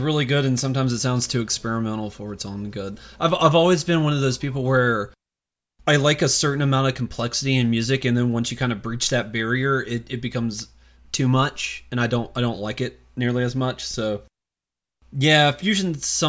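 No technical fault can be heard anywhere in the recording; the signal stays steady and intact throughout.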